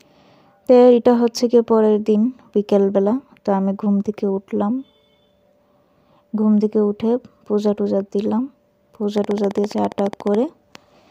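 Something in the chain, most likely interference from nearby equipment or a faulty connection or power supply, injects a train of clicks into this audio from 9.18 to 10.36 s. The pulses arrive at a steady 14.5 per second, about twenty in all, each with much the same shape. They peak roughly 5 dB above the underlying sound, so they come through as a regular, rapid ticking that sits on top of the audio rather than blending into it.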